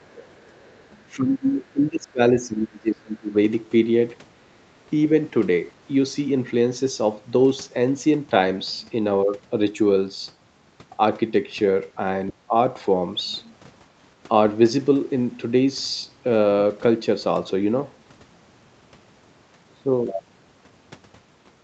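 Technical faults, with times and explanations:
0.01–0.89 s: other side's voice leaking through. A faint second voice sits about 30 dB under the speech, likely loudspeaker echo the echo canceller failed to remove fully.
1.16–3.34 s and 12.32–12.55 s: speech suppressed in double talk. The speech drops by up to roughly 25 dB in the first stretch and about 15 dB in the brief second, likely the echo canceller attenuating it during simultaneous talk.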